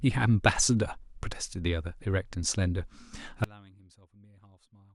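From 3.44 s to 4.95 s, one channel inverted is the likely cause: one stereo side has its polarity flipped, so the content both sides share cancels when they are summed to mono. The speech falls by about 32 dB, leaving only a faint residue.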